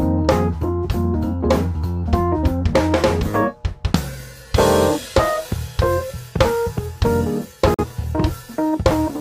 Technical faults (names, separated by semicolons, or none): digital broadcast dropout